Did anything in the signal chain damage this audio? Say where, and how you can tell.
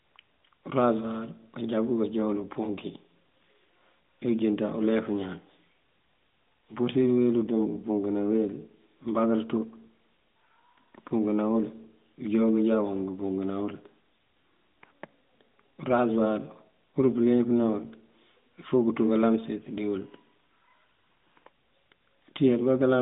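No, nothing in the chain damaged it; it's just ordinary narrowband mobile speech, coded at 12.2 kbps with the usual telephone band of roughly 150 Hz to 3.7 kHz and nothing above 3.8 kHz.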